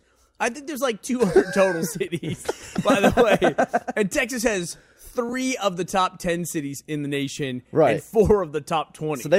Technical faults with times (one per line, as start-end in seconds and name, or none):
none